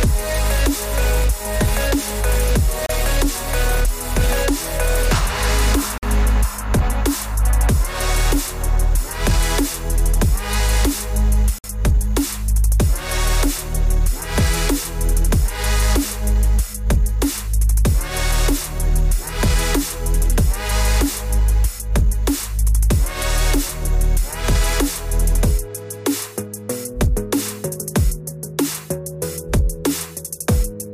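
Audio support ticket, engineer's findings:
Silent gaps at 2.86–2.89, 5.98–6.03 and 11.58–11.64 s (31–56 ms); likely Bluetooth stall, headset buffer ran dry awaiting resent packets. Clean mute, no crackle.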